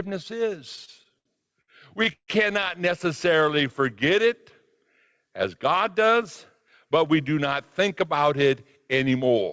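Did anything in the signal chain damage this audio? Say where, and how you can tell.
Yes, the damage happened in the network and jitter-buffer stage of a call path. Between 0.76 and 2.31 s there are repeated stalls (stutter): nine separate holds, totalling about 361 ms, with the longest lasting 152 ms. Packets arrived late or more slowly than playback consumed them, so the buffer kept running dry. Each time, the receiver extended the last sound and faded it during the longer holds. Nothing is lost, but about 23% of that stretch is filler, which makes it drag and stutter.

From 3.28 to 3.82 s there is a jitter buffer slow-down. The audio plays at about 91% speed with unchanged pitch, adding 55 ms. The buffer was rebuilding its reserve by repeating single pitch periods, which stretches the sounds rather than lowering them. In the same call path, the band stops at 8 kHz, which fits a wideband call codec such as G.722.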